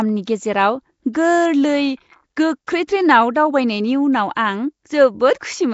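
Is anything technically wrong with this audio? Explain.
Yes. Throughout, the speech sounds grainy and watery, with noisy fizz around it and nothing above 7.7 kHz. This is likely Nellymoser compression at a rate that fits 32 kbps, filling starved bands with noise.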